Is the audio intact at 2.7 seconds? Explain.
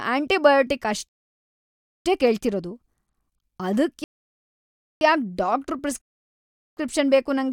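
Yes, the speech at 2.7 seconds is intact, with no dropout, click or other fault at that moment.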